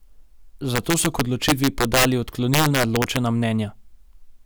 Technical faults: integer overflow

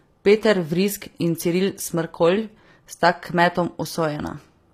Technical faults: HE-AAC compression

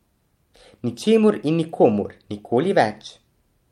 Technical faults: none

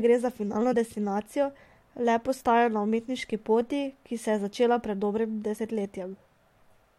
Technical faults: compressed frames skipped

